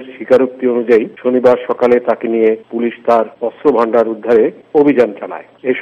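Harsh fuzz and crackle ride on the loud passages: a short burst at 0.32 to 0.37 s, a long stretch from 0.91 to 2.48 s, then 3.10 to 3.19 s, 3.67 to 4.36 s, 4.77 to 5.04 s, and a brief instant at 5.71 s. This is hard clipping. The peaks exceed what a stage in the chain can pass, by about 6 to 7 dB early on, about 3 to 5 dB later, and barely at all at 5.71 s. Their tops are sheared flat, spraying harmonics high into the spectrum.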